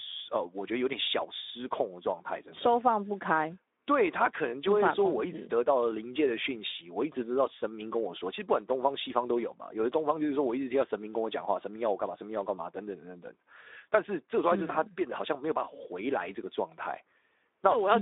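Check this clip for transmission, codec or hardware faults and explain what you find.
One codec fault runs through the whole clip. Speex codec, throughout: the speech sounds hoarse and noisy, which fits a CELP coder at roughly 11 kbps starving the excitation, inside a 250 Hz to 3.7 kHz band with nothing above 3.8 kHz.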